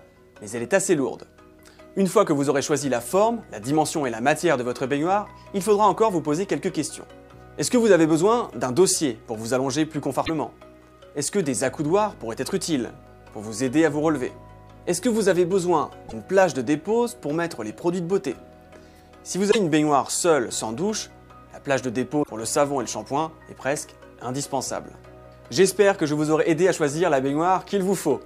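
Damaged data in the compressed stream corrupts frames, so the decoder misreads them and loses sync until it finds the next frame header. Each break is a brief chirp, squawk, click or short hole of about 70 to 90 ms, at 10.23–10.30 s, 16.05–16.14 s, 19.48–19.56 s and 22.19–22.28 s.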